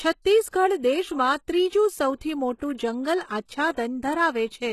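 Speech, with plainly audible HE-AAC compression damage throughout, most likely from spectral band replication at a low bitrate (consistent with roughly 16 kbps): the treble is synthesised from copied lower bands, so sibilants turn gritty and lispy, and nothing survives above 12.3 kHz. Pre-echo appears from 2.58 to 2.61 s, where quantisation noise spread across the codec block smears about 30 ms of hiss ahead of a sharp attack, softening its onset.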